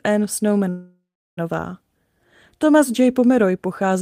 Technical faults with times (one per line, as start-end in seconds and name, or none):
0.69-1.39 call audio freeze